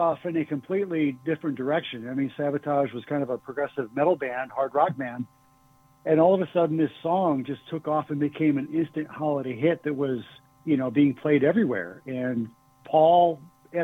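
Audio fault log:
No faults detected anywhere in this audio.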